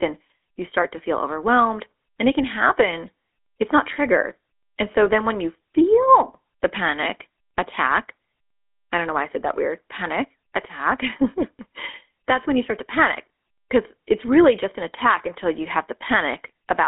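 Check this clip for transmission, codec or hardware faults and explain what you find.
One fault is present, lasting the whole clip: GSM full-rate codec coding. The speech was squeezed through a vocal-tract model driven by sparse, regularly spaced pulses, at a rate that fits 13 kbps, on a line passing only 250 Hz to 3.6 kHz. The result sounds thin, buzzy and plainly gravelly throughout.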